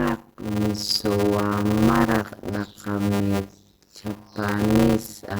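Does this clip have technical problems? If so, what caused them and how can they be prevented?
Yes. Throughout the speech there is a block size mismatch (padded). One stage hands over shorter blocks than the next one reads, which fits 256-sample writes, and the rest of each block is filled with zeros. That puts a silent gap in every block, producing a 100 Hz buzz, and slows the speech to about 0.53 times normal speed while the timbre stays the same. It can be prevented by making both stages use the same block size, or by buffering so that every read is completely filled with audio.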